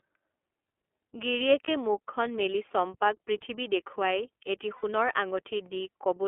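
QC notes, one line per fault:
throughout: iLBC codec, narrowband speech with nothing above the telephone band of 300 Hz to 3.4 kHz, coded in 30 ms blocks at 13.33 kbps; sounds plainly rough and synthetic. Spectrogram shows a hard ceiling near 3.4 kHz and smeared, grainy harmonics.
1.64 s and 4.76 to 4.84 s: lost iLBC frames, one 30 ms frame just before "মুখখন মেলি চম্পাক পৃথিৱী", then two frames (60 ms) right after "চম্পাক পৃথিৱী দেখুৱাই এটি". The decoder repeats the last pitch cycle with added noise, heard as a brief buzzy held vowel; spectrogram shows frozen, evenly spaced harmonics, waveform a repeating periodic stretch.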